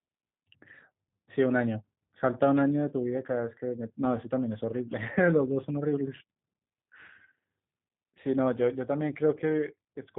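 From start to finish the speech carries G.729 codec damage, plainly audible. Rather than storing the waveform, the codec rebuilds each frame from a vocal tract filter, a pitch estimate and a few pulses, so voicing comes out rough and faintly synthetic, consistent with an 8 kbit/s rate. Nothing above 3.8 kHz survives. A simple band-limited telephone line would sound muffled but still natural; here the buzzy, modelled texture gives the codec away.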